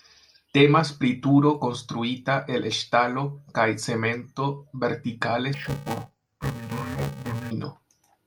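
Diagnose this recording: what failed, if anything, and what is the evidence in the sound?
Interleaved audio read as planar, in the driver or buffer stage. From 5.54 to 7.51 s, after "ŝtalo kaj cemento vertikale", speech turns dull and robotic, buzzing near 345 Hz without a clear octave drop. Short blocks, fitting 128 samples, were split into halves, not alternated.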